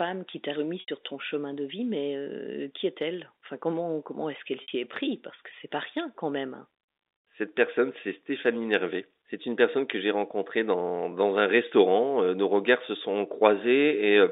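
At 0.80 to 0.88 s and again at 4.62 to 4.68 s, packet loss with pitch repetition leaves gaps of 80 ms and 60 ms, sized like a few 20 ms packets each. The receiver bridges each gap by looping the last pitch period and fading it out, so the sound briefly holds on a buzzy, frozen tone. On a spectrogram this shows as flat, unchanging harmonic stripes. In the waveform it appears as identical repeating cycles that shrink toward the end.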